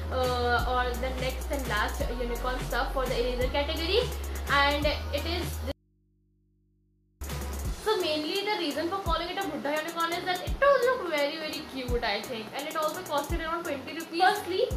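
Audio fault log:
5.72–7.21 s, audio dropout to a faint residue: the signal vanishes abruptly for about 1.5 s, leaving mains hum roughly 40 dB down, likely from a broken link ahead of a still-live input. Instant edges and audible hum distinguish it from a pause or fade.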